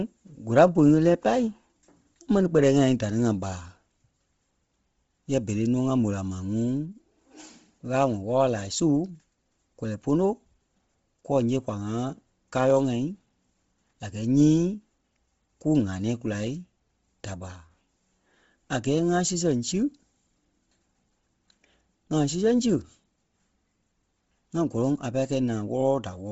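All the way through, the speech is heavily grainy and breathy above the midrange, with nothing past 7.7 kHz. That's likely Bluetooth LC3 compression at a low bitrate.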